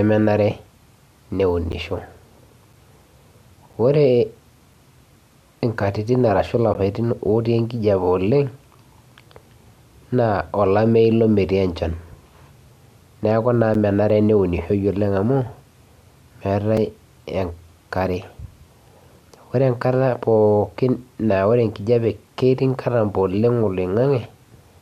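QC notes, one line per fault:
1.72, 2.73, 3.73, 4.74, 6.74, 8.75, 13.74 (just before "menare ilo"), 16.77 s: gap between stream segments. Eight short holes of silence, about 4 to 13 ms each, cut into the speech with hard edges. They fall on a 1 s grid, matching the segment length. Each comes from mismatched timestamps at a segment boundary, which leaves a small space that the player fills with silence. Nothing is dropped, so the speech resumes intact right after each break.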